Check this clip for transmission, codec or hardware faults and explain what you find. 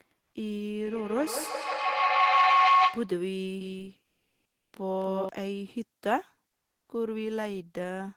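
Three faults are audible: a feedback howl early on, a doubled audio track in the middle, and a short stretch of comfort noise in place of the background inside that doubled section.

From 0.85 s to 3.21 s there is a feedback howl. A microphone is picking up a loudspeaker carrying the same call, and each pass around that loop comes back stronger. The energy collapses onto a tone around 1 kHz that pulses roughly every 150 ms, the loop's round-trip time, and peaks about 9 dB above the speech before it stops.

From 3.61 s to 5.29 s the speech has a doubled audio track. A second full-band copy runs about a third of a second behind the original and a few dB quieter. It has no reverberant tail or room colouring, and it starts and stops abruptly, so it sounds like a clean echo. The likely cause is the same audio arriving twice, once through a slower capture path.

From 4.07 s to 4.71 s, for 640 ms, the room background is replaced by comfort noise. 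The natural texture, about 59 dB below the loudest speech, gives way to a smooth, featureless hiss, with the background level shifting by about 3 dB. This is likely discontinuous transmission, consistent with Opus DTX. The sender stopped transmitting when it detected no speech, and the receiver filled the gap with synthetic noise roughly matched to the real background.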